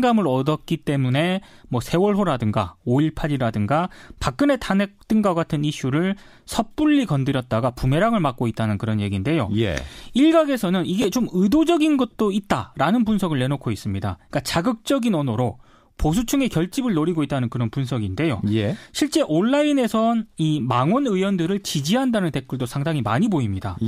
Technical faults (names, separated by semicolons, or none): chunks out of order